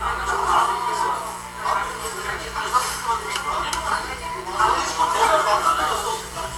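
A raspy mains buzz runs throughout at about 20 dB below the sound, built on 60 Hz with spiky harmonics into the kilohertz range, unlike a smooth low hum.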